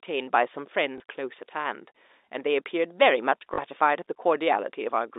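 Packet loss with last packet repeated occurs in this telephone-band speech at 0.98 s and from 3.54 to 3.58 s. The 20 ms and 40 ms gaps, which fit one and two 20 ms packets, were filled by replaying stale audio, giving a small blip and a brief 50 Hz robotic stutter.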